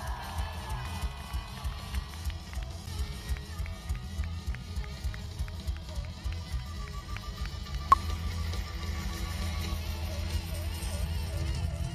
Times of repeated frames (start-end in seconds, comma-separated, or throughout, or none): none